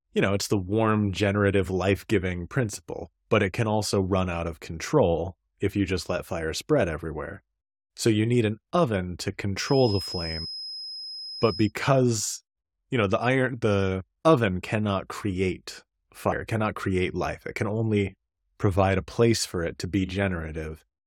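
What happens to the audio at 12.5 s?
Nothing goes wrong at 12.5 s; the speech there plays through intact, with no dropout, click or distortion.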